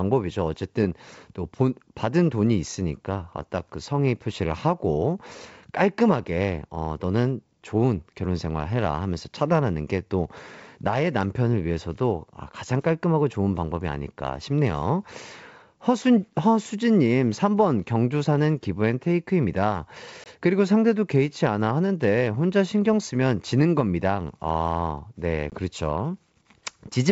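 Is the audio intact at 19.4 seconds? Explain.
Yes, the audio is intact at 19.4 seconds, with no fault at that point; the speech there carries only the character of its G.722 wideband telephone coding at 64 kbit/s.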